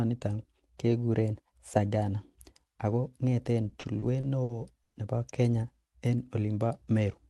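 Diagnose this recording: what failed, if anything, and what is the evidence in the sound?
Late network packets repeatedly drained the jitter buffer, causing repeated stalls (stutter) after "ako ngeten" from 3.69 to 4.96 s: six gaps were filled with continued sound, totalling 270 ms, the longest 110 ms.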